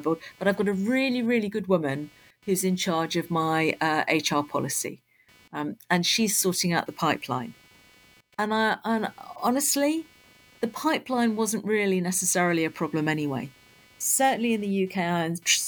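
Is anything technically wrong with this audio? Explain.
Yes, there's computer activity noise under the speech the whole way through: a buzz pulsing around 300 Hz, about 30 dB down, from processor or peripheral load disturbing the shared audio ground.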